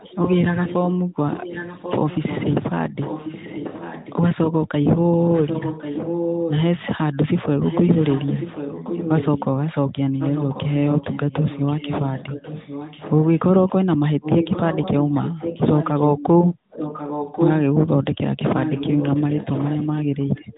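An echo leak runs through the speech from 0.00 to 4.18 s, 5.24 to 6.81 s, 10.18 to 13.39 s, 14.21 to 17.53 s and 18.62 s to the end. A delayed copy of the talker trails each phrase by 1.09 s, sitting about 10 dB under the direct speech and rising to about 5 dB under it in the 5.24 s stretch. The likely cause is a far-end echo canceller letting loudspeaker pickup back into the call. The narrowband channel, with nothing above 3.8 kHz, carries this echo too.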